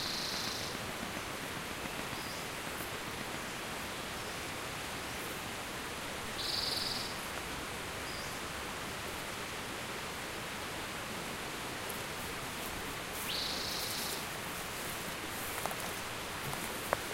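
From 0.06 to 3.35 s a train of clicks runs over the sound: about thirty near-identical pulses at a steady 7.3 per second, standing well clear of the material, roughly 15 dB up. The likely cause is interference or a faulty connection or power supply. The even spacing and matching shape separate it from random crackle.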